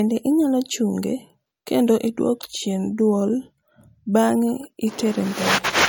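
From start to finish the speech carries the marks of low-bitrate audio saved at a high bitrate. There's nothing above 18 kHz, and the smeary, watery texture of a heavy MP3 encode sits under everything. My read is that this was likely a low-bitrate MP3, around 48 kbit/s, later re-encoded at something like 256 kbit/s. The bigger file can't bring back what that first pass threw away, so the damage just carries through.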